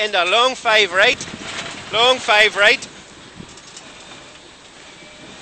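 At 1.13 s and again at 2.53 s there's a repeated buffer: a tiny 2.67 ms slice, which fits a 128-sample buffer, replays two then three extra times, so you hear a quick buzzy click each time.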